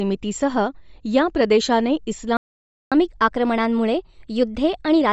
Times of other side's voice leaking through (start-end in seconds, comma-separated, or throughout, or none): none